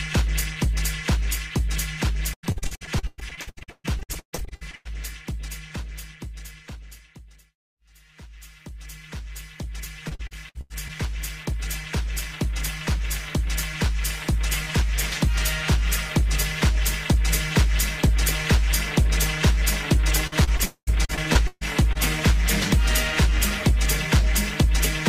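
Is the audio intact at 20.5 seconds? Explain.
No, 20.5 seconds falls inside a burst of repeated packet loss that runs from about 20.27 to 21.97 s. Over that stretch there are 11 separate holes, the longest about 140 ms. Each one gets papered over by stretching the last bit of sound, about 343 ms patched in total, while roughly 340 ms just drops out. That's why it comes across choppy, with bits missing.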